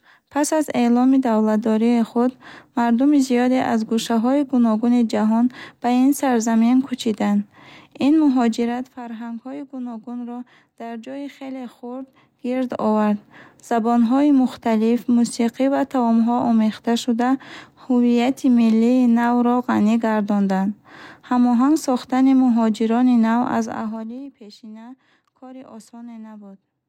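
Zipper noise at 8.53–8.96 s, 11.95–12.89 s and 23.55–24.32 s. The level moves in unsmoothed 2 dB steps: down about 15 dB, up about 15 dB, then down about 20 dB. Each step clicks, making a ticking zip of roughly 15, 7 and 15 steps per second.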